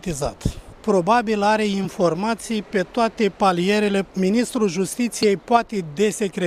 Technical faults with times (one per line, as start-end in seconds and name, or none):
1.84 damaged data in a compressed stream
5.23 damaged data in a compressed stream